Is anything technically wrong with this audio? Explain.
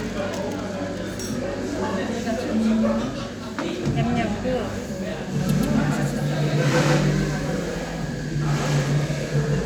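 Yes. From 5.40 s to the end, everything is heard twice, a same-level copy trailing by roughly 150 ms with no decay: a doubled audio track, likely from a second, slower capture path.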